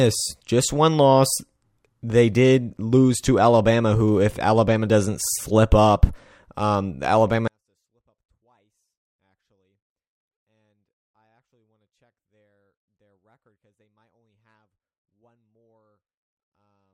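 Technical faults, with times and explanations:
7.48–16.94 s, 24-bit alignment error (too quiet): the speech abruptly falls about 48 dB and stays nearly inaudible to the end, though still clean. The 24-bit samples sit in the low bytes of 32-bit words but are read as full 32-bit integers.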